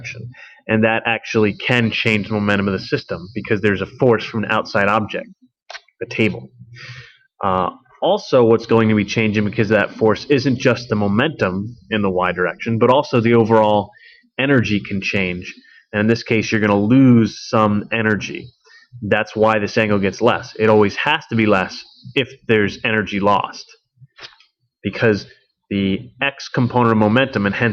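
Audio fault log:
No faults detected anywhere in this audio.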